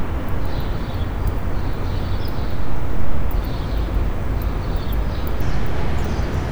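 From 5.41 s to the end at 6.51 s, a section at the wrong speed runs about 1.36 times too fast, lifting pitch around five semitones, likely from playback against a mismatched clock. The sounds turn brighter and hurried; a spectrogram shows every feature jumping upward, with events squeezed closer together in time.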